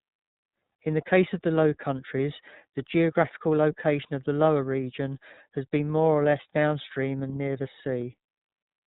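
From start to finish, the speech carries iLBC codec damage, and it is plainly audible. Nothing above 4 kHz survives. Each 30 ms frame is coded on its own, which fits a bitrate near 13.3 kbps. The speech sounds rough and slightly synthetic.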